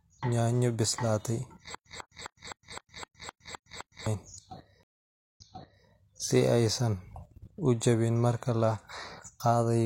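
Speech, with a stutter with silent gaps from 1.75 to 4.07 s: a 146 ms fragment repeats nine times every 258 ms, separated by 112 ms of flat digital silence. On a waveform this looks like identical blocks with empty gaps between them, and it likely comes from a stalled player retrying its buffer. A stream reconnect follows at 4.83 s. The spectrogram shows a 527 ms blank column, and then the audio resumes about 0.51 s earlier, repeating material already heard, before running normally to 5.87 s.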